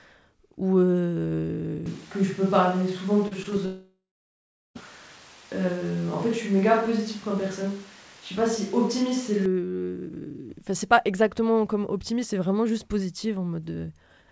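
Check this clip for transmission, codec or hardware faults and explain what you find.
Three kinds of fault are audible in this speech, all clustered in the first two-thirds of the clip. The band limit at 8 kHz and the coding noise are consistent with a wideband G.722 call path, likely at 64 kbps.

Switch to a distant microphone: From 1.86 s to 9.46 s the sound turns roomy and hollow, with thinner bass and background noise sitting roughly 25 dB below the speech. The level barely changes. The likely cause is the close microphone dropping out, leaving a more distant pickup carrying the signal, with an abrupt change in and out.

Short concealed packet loss: Three brief gaps occur at 3.28 to 3.33 s, 3.43 to 3.46 s, and 3.50 to 3.54 s, missing about 40, 20 and 20 ms. The decoder bridged each by extending the preceding sound, heard as quick smears or wobbles before real audio resumes.

Long network dropout: From 3.66 s to 4.77 s about 1.1 s of audio never arrived. 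The concealment stretches the last sound into a fading buzz or hiss, and roughly the final three-quarters of a second is near-silence. The audio then picks up with the lost section simply absent. The likely cause is a network interruption.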